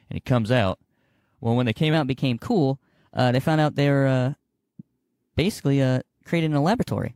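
It's a speech recording, and from 1.94 s, right after "when they came", through to the end, it suffers from a wrong sample rate. The speech jumps about 1.5 semitones higher and runs 1.09 times faster, with pitch and pace shifting together. That pairing means the samples are being clocked out faster than they were captured, with no rate conversion in between. A ratio of that size fits 44.1 kHz material played back at 48 kHz.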